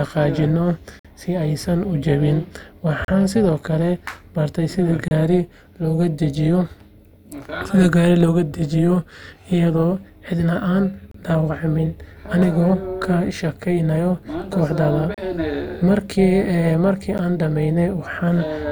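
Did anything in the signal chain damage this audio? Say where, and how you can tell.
Yes. An overlap-add ripple runs through the whole speech clip. The level pulses by about 6 dB at around 300 Hz, a metallic buzz with extra tones around each note. A frame-based processing stage rebuilt the audio with window overlaps that don't sum to constant gain.

Gaps between stream segments occur at 0.99, 3.05, 5.08, 11.11 and 15.14 s, the last right after "kasjageynayo koxda". They are hard-edged silences of 52, 36, 29, 30 and 34 ms on a 2-second grid. Segment timestamps leave holes at playback, and the player fills them with silence.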